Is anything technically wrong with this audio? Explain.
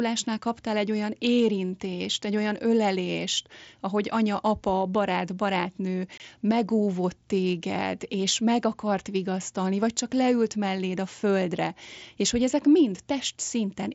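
Yes. Unconcealed Bluetooth headset packet loss occurs between "anya apa barát barátnő" and "megóvott téged és meg", from 6.18 to 6.20 s. About 22.5 ms of voice packets on the mSBC wideband link never arrived, consistent with three lost frames, and nothing filled the gap. The speech drops to a brief hole with hard edges.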